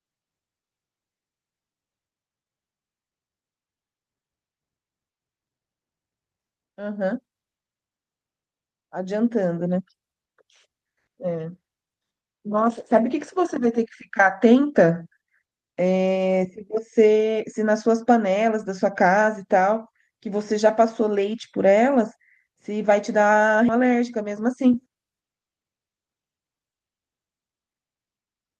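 Speech carried over a WebRTC call path, with the Opus coding audible as a spectrum that stops near 12 kHz. At 18.57 to 18.67 s and again at 22.81 to 22.91 s there is a lost packet rebuilt from error correction. Each spot sounds like about 60 ms of rougher, noisier audio with no gap, which points to three lost packets replaced by the low-bitrate copies carried in the following ones. On a spectrogram these spots appear as short smeared patches with grainier texture. At 23.68 s there is a CD skip: the laser jumped to another turn of the spiral. A tick and a mute of a few milliseconds mark where playback resumes from a different place. On the waveform this shows as a brief near-silent notch with a discontinuity on either side.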